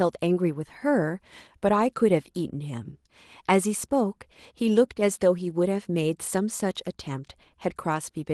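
Speech, carried over a call codec that limits the top end to about 12 kHz. At 1.67 to 1.69 s there is a lost packet rebuilt from error correction. One 20 ms packet went missing. The decoder played the low-bitrate copy carried in the next packet. So there is no gap. That stretch just sounds briefly rougher and noisier.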